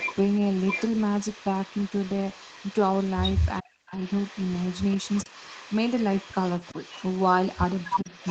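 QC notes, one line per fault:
0.0–3.61 s and 3.92–8.30 s, echo leak: a faint delayed copy of the speech trails the direct sound by 395 ms, sitting roughly 20 dB below it. This is likely a loudspeaker-to-microphone return at the far end that the echo canceller did not fully remove, which sent its own playback of this audio back up the line.
3.61–3.94 s and 8.01–8.09 s, speech suppressed in double talk: the speech sinks sharply. In the first event it drops by about 40 dB across roughly 300 ms and nearly vanishes. In the second it dips by about 15 dB for some 70 ms. These dips fall where the returning echo overlaps live speech, and the likely cause is the canceller failing to separate the two and attenuating everything at once.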